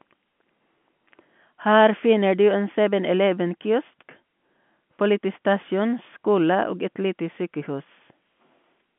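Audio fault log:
No faults detected.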